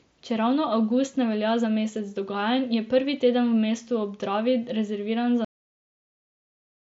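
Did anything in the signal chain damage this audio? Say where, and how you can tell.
Yes. A cut-off end at the buffer or storage stage: at 5.45 s the speech stops mid-sound and falls to digital silence, with no decay. The final buffers were never written. The waveform shows a vertical edge into a flat line, and the spectrogram's band, which stops near 7.8 kHz from the mSBC link, ends abruptly there.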